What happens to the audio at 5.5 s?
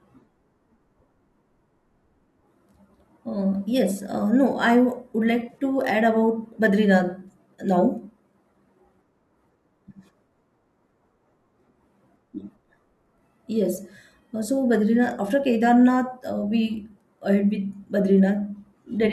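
At 5.50 to 5.58 s, just before "to add", there is AAC frame loss with concealment. About 40 ms of audio drops out in short gaps of roughly 20 ms, scattered over 80 ms. The decoder rebuilds each gap from the last good spectrum, which leaves a brief smeared, phasey patch.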